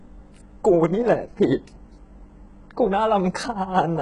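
From start to finish the speech carries heavy codec damage: the treble sounds synthetic, and s sounds come out gritty and metallic, with nothing above 11 kHz. The likely cause is HE-AAC compression at a very low bitrate, around 12 kbps, where the upper band is rebuilt by copying lower content upward. Unlike a plain low-pass filter, the top still has energy, but its harmonics no longer line up with those below.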